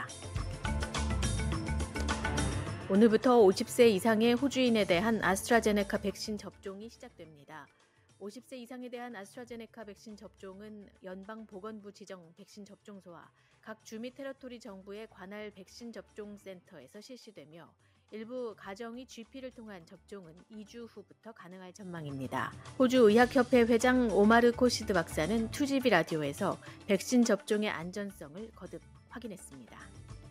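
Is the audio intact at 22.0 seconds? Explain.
No. At 22.0 s the audio is inside a burst of zipper noise that runs from 21.76 to 22.10 s. A level change of roughly 20 dB is applied in 2 dB steps rather than as a smooth ramp, at around twenty steps per second. Each step jumps the gain abruptly and leaves a small click, so a ticking, zipping texture rides on the sound until the level settles.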